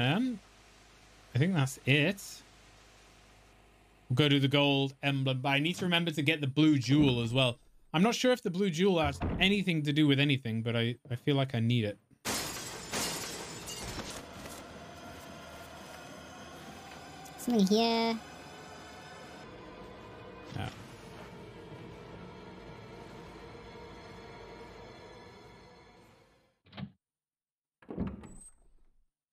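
From 14.10 to 19.44 s a section at the wrong speed runs about 1.48 times too fast, jumping up roughly seven semitones, likely from playback against the wrong clock. Tempo and pitch rise together, unlike a pitch shift that keeps the timing intact.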